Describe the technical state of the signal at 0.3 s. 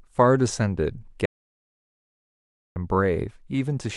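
At 0.3 s the speech signal is intact, with no audible fault at that point.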